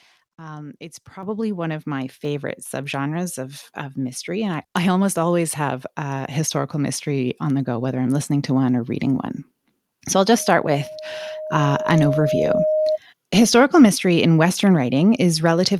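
At 1.23 s and again at 2.25 s the microphone volume is stepped up, about 9 dB then about 3 dB, so voice and background jump louder together. From 10.36 to 12.98 s there's a loudspeaker feedback squeal: the mic picks up its own speaker, and a 621 Hz tone builds over roughly two seconds to about speech level.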